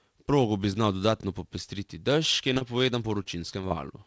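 Right after "dodatno popestriti dež ki", from 2.54 to 2.87 s, you get repeated packet loss (robotic sound): four short dropouts, the longest 28 ms, each papered over by stretching the last bit of sound, so roughly a fifth of that span is patched. Then it comes back from 3.23 to 4.04 s with five gaps, the longest 22 ms. The speech turns choppy, with little chunks missing, all on top of the G.722 call path's cut-off at 8 kHz.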